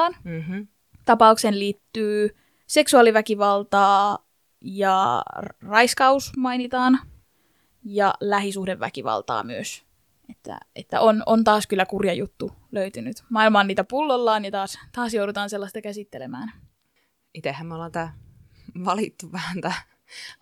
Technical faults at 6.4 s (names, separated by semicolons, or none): one channel drops out